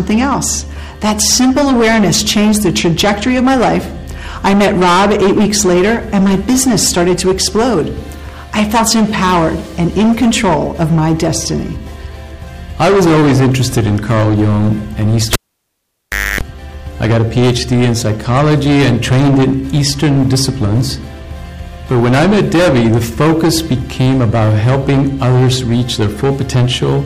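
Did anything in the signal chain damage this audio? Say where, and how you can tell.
Yes. The whole clip carries a harsh fuzz on every loud passage. This is hard clipping: the level is driven about 17 dB past what a converter or gain stage can pass, so a large share of peaks are sliced flat, adding dense upper harmonics.

In the analogue wiring, a cable was pulled and plugged in between 15.33 and 16.41 s. A pop drops the sound to near silence for about 1.03 s. A 50 Hz mains buzz of roughly 0.26 s follows as the plug tip makes contact, then a second pop restores the signal.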